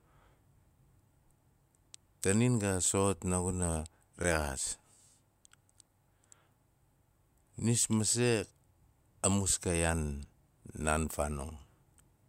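Speech, broken by three blocks of digital silence at 2.86 s, 4.24 s and 10.25 s, about 2 ms, 5 ms and 5 ms long, heard as ticks. Output buffers likely went unfilled, the 5 ms gaps fitting 256-sample buffers. The waveform drops flat to near silence, and the spectrogram shows thin vertical lines.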